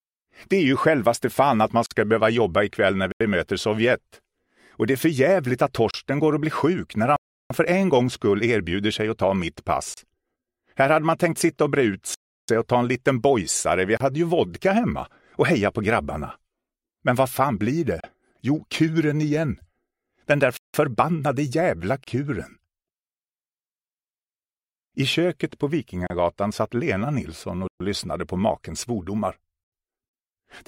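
At 1.86 s, a gap at a join of encoded pieces opens for about 48 ms. Gaps of 32 ms recur every 4 s: 5.91, 9.94, 13.97, 18.0, 22.04 and 26.07 s. Pieces were joined untrimmed. Encoder delay and end padding remain. The sound stops, its edges smeared, then resumes where it paused.

Blocks of digital silence fall at 3.12, 7.16, 12.14, 20.57 and 27.68 s. They last 85, 341, 341, 171 and 128 ms. Zeros were played there. The first four fit buffers of 4096 to 16384 samples. Each cuts without fade around a clear hole.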